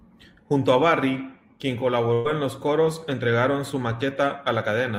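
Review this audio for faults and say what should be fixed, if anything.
A burst of packet loss runs from 2.13 to 2.27 s, just before "en los coros entregaron". Roughly 120 ms of speech is missing. The receiver fills the 112 ms gap by continuing the last sound and fading it down instead of going silent, which sets it apart from a plain dropout. Adding jitter buffering and forward error correction on the transmission path would prevent it.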